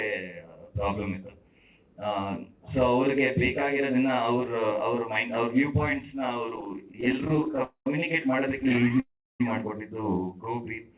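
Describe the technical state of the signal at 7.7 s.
That's a call audio freeze from 7.63 to 7.87 s. The last sound trails into a fading buzz or hiss, then 100 ms of silence. It's likely a starved jitter buffer, so nothing's lost, just pushed 225 ms later.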